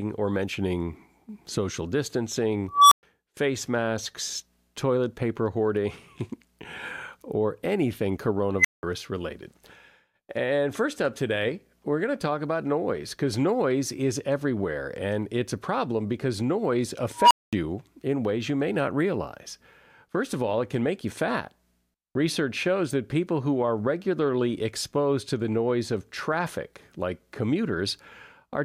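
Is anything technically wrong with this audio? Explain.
Yes. An unstable filter fault occurs three times: at 2.68–3.03 s, 8.59–8.83 s and 17.17–17.53 s. Bad recursive coefficients make its output grow without bound. A tone of around 1 kHz, 2 kHz and 1 kHz respectively swells over 231, 53 and 139 ms, clips, then overflows into silence lasting 116, 186 and 221 ms. These follow "or mentioning social distancing", "or anything" and "a problem because noise".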